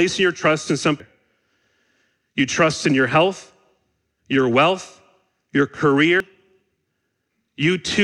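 At 1.0 s, just after "your trust in", compressed frames are skipped. About ten frames go missing, roughly 0.7 s of speech. The audio jumps forward. At 6.2 s, after "your wealth your", the same jump recurs.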